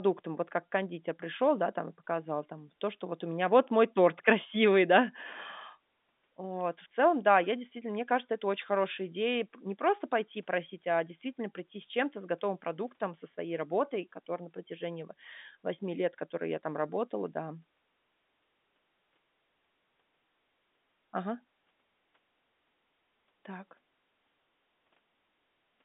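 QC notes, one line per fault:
No faults to note; the speech comes through a normally working G.711 telephone line with nothing above about 3.8 kHz.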